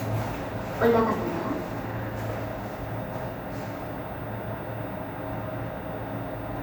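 A recording of sounds with no technical faults to report. Nothing heard in it points to a problem in how the audio was captured, processed or delivered.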